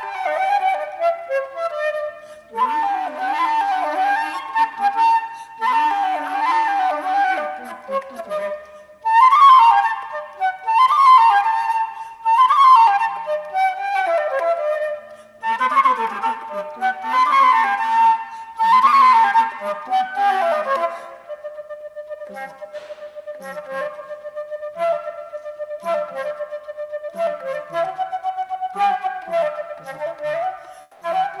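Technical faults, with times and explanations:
30.81–31.01 s, comfort noise in place of the background: for 200 ms the real background, about 33 dB below the loud passages, becomes a steady, featureless hiss about 2 dB quieter, likely because Opus discontinuous transmission paused sending and the receiver filled the gap with synthetic noise.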